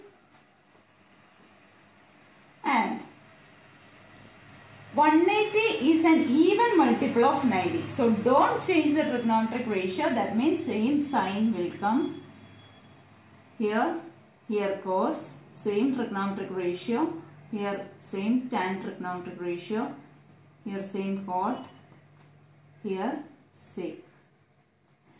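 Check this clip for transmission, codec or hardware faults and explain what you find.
Nothing turned up here on a listen; there are no dropouts, glitches or hardware trouble to point to anywhere in the clip.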